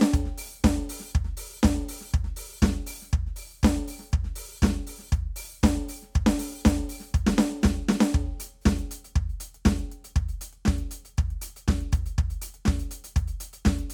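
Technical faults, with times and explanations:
No technical faults are audible anywhere in this music clip.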